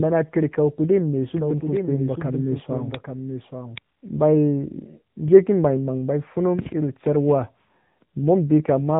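From the first moment, the speech carries AMR narrowband mobile codec damage. Nothing above 3.9 kHz gets through, so the sound is thin and boxed in. The damage is plainly audible. The voice turns buzzy and sounds synthetic. That points to a low bitrate, near 8 kbps. At that rate the codec's vocal tract model and sparse pulse excitation cannot rebuild the voice faithfully.

At 1.36 s a doubled audio track cuts in abruptly. A second full-band copy of the speech trails the original by roughly 0.7 s. It sits about 5 dB quieter. It has no room colour and no decay, so it sounds like a clean, overlapping replay. The likely cause is a second, slower capture path or an edit that held two copies out of step. The copy stops abruptly at 3.78 s.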